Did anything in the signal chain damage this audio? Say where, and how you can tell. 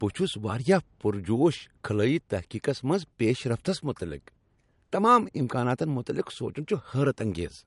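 Yes, at the codec stage, and it runs the whole length of the speech. This is low-bitrate audio saved at a high bitrate: there's nothing above 11.2 kHz anywhere, and the speech carries the smeared, swirly texture of a heavily squeezed encode, even though the file presents as high quality. That points to a likely chain of a low-rate MP3 pass, something like 48 kbit/s, later re-saved at 320 kbit/s. The second encode can't bring back what the first threw away.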